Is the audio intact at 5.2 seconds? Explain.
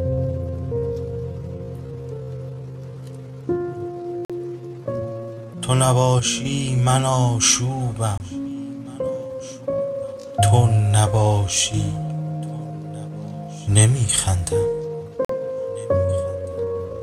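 Yes, the audio at 5.2 seconds is intact, with no dropout, click, distortion or other fault at that moment.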